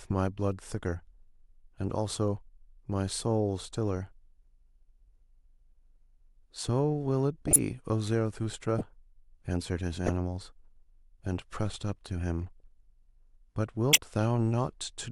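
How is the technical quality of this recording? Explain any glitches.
The speech carries five short decoding glitches, all corrupt frames decoded, at 7.46 to 7.56 s, 8.78 to 8.82 s, 10.07 to 10.10 s, 12.60 s and 13.90 to 13.99 s. In each, flipped bits in compressed frames were decoded as if valid, so misread gains and codes put energy at the wrong frequencies for a few frames. The result is a chirp or noisy burst, loud at 7.46 and 13.90 s, around -10 dBFS, and barely audible at 12.60 s. Unlike a dropout or concealed loss, this adds a foreign sound rather than a smear.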